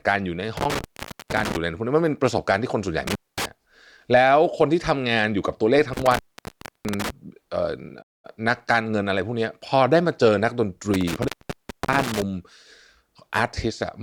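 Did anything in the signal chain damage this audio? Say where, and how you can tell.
Yes. The analogue wiring shows an intermittent contact. The speech cuts out with crackle at the edges four times: 0.57–1.57 s, 3.07–3.45 s, 5.93–7.10 s and 10.94–12.22 s. A loose plug or cable opened for 460, 230, 660 and 610 ms respectively.

There is also a playback stall at 8.01–8.25 s. The speech stops mid-flow and goes silent for 220 ms, then resumes. That clean gap, with no crackle, points to the player's buffer. The likely cause is that it ran dry or its thread was briefly blocked.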